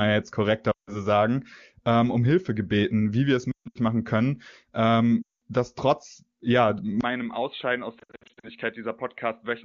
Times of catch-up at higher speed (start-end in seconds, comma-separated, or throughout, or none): none